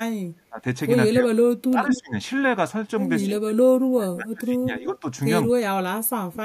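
The speech keeps dipping. This is speech suppressed in double talk. It likely happens because both sides talked at once, and the echo canceller could not separate this talker from the returning loudspeaker echo, so it turned everything down. Short dips occur at 0.0 to 0.06 s and 0.49 to 0.64 s, each by about 20 dB. The voice then drops by about 40 dB from 1.11 to 1.48 s, and by about 20 dB from 1.7 to 2.15 s.

Inside that last dip, from 1.91 to 2.0 s, a delayed copy of the voice comes through. This is an echo leak. It trails the original by 193 ms and is roughly as loud as the speech itself. The likely cause is a far end playing the call on a loudspeaker, where the echo canceller let some of its microphone pickup through and sent it back.

The suppression returns for longer stretches. It covers 3.27 to 5.05 s and 5.48 to 6.42 s, with drops of about 35 dB. Across these spans the voice fades.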